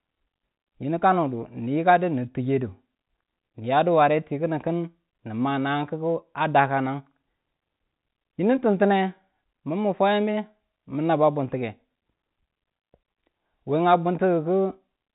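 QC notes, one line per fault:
No fault is heard in this speech clip. The sound has the narrow band of G.711 telephone coding, with nothing above about 3.8 kHz, and any quantisation noise from the telephone format stays faint.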